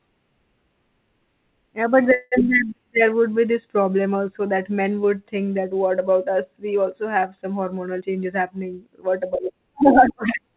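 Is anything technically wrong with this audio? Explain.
Yes, there are two faults in this speech, heard through a narrowband call path with nothing above 4 kHz, consistent with G.711 mu-law.

From 2.14 to 2.34 s there is a call audio freeze. The last sound is held as a fading buzz or hiss for about 0.18 s, likely from delayed packets. Speech then resumes where it stopped, with nothing lost.

From 8.00 to 9.60 s there is a jitter buffer speed-up. Repeated pitch-period cuts, roughly a fifth of a second in total, make the speech run at 111 % speed without changing pitch, so it sounds hurried.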